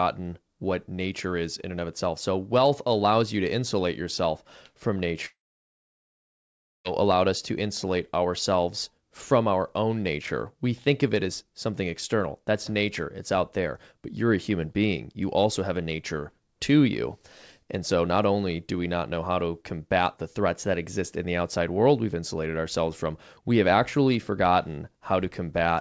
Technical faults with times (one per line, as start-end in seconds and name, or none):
5.26-6.88 long network dropout